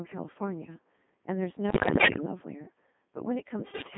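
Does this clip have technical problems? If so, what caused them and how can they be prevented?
Yes. The whole clip has passed through the Codec 2 vocoder at 2.4 kbit/s, confined to roughly 150 Hz to 3.6 kHz, and the damage is heavy. Codec 2 keeps only pitch, voicing, level and a spectral envelope, then rebuilds the speech from sine waves, so the result is buzzy and robotic throughout. A high-bitrate codec's faults would instead come and go as smearing or swirling. This coloration is steady and synthetic. The fix is a higher-rate codec, or a better channel that allows one.

Bit errors on digital voice radio break in from 1.70 to 2.26 s and again from 3.60 to 3.86 s, with roughly a tenth and then somewhat fewer of the bits corrupted. Each flipped bit corrupts the pitch, level or tone settings of a whole synthesis frame, so the sound jumps into warbles, bleeps and gibberish. Packet loss would instead leave gaps or repeated fragments. 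These bursts are garbled rather than silent. A stronger signal, staying inside coverage, or stronger error protection would prevent them.

Echo leak appears briefly at 2.64 to 2.72 s as a faint delayed copy of the speech, about 25 dB below it and lagging by about a third of a second (341 ms). The likely cause is a loudspeaker on the far end whose echo canceller let some of the played-back call return through its microphone. The long delay and low level set it apart from room reverberation, which trails directly off the sound. A headset, or a better-tuned echo canceller, would stop it.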